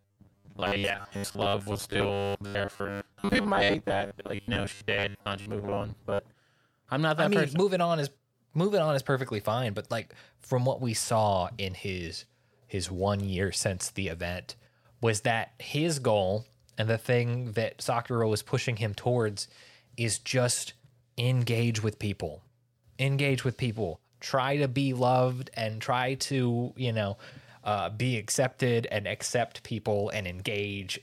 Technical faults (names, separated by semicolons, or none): robotic sound from repeated short buffers